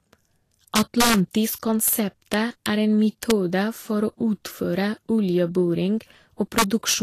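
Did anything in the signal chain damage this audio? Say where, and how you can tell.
Yes, two separate problems. The speech sounds hissy and grainy all the way through, with roughened tones, smeared consonant attacks, and nothing above 14.2 kHz. That's most likely lossy Vorbis coding at the codec or storage stage. The sound fits a low rate of around 38 kbps, where the encoder drops the top band and quantises the remaining treble so coarsely that fine detail turns into noise of similar energy.

The other problem is integer overflow, probably in a gain or mixing stage during sample-format handling. Hard, violent cracks land at 0.76–1.14 s, 1.88–1.93 s, 2.34–2.66 s (just before "er en"), 3.23–3.31 s (just after "er en"), and 6.58–6.94 s. They're much harsher than clipping, because the peaks that exceeded full scale by about 1 to 5 dB weren't limited. They wrapped around to the opposite sign, so each one flips across the whole range.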